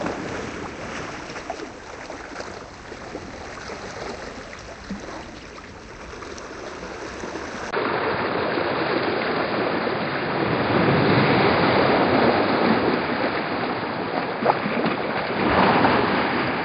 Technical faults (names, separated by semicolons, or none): skip ahead; jitter buffer speed-up; input switched to a poorer device